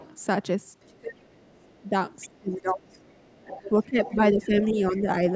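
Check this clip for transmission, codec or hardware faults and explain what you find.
Two faults appear, both typical of a speakerphone call with imperfect echo cancellation, on a band-limited call path topping out at 8 kHz.

Other side's voice leaking through at 0.00–0.14, 1.34–2.38, 2.94–4.62 and 4.97–5.32 s: a faint second voice, roughly 20–30 dB below the speech, likely residual loudspeaker echo the canceller missed.

Speech suppressed in double talk at 0.87–1.93, 2.40–3.01 and 3.79–5.07 s: the talker's level dips by up to roughly 25 dB while both sides overlap, likely with the canceller attenuating everything.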